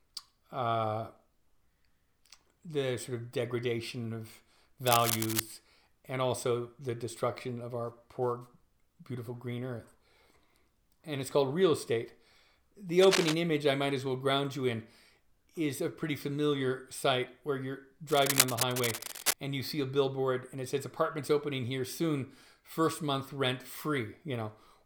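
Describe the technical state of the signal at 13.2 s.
Cable scratch noise runs from 13.02 to 13.35 s, a burst of dense, uneven scratching and rustling roughly as loud as the sound itself. It is likely caused by a worn cable, connector or control being moved, its contact resistance fluctuating rapidly.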